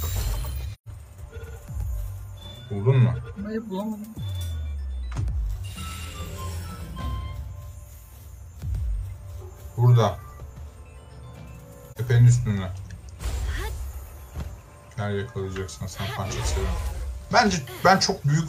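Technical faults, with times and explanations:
0.73–0.88 s, AAC frame loss with muting: the sound fades out into a soft-edged hole and back in, which fits three consecutive lost frames the decoder zeroed, with overlapping windows smoothing the edges.
11.92–11.98 s, AAC frame loss with muting: a brief dip in level, which points to a single lost frame of about 43 ms whose spectrum was set to zero.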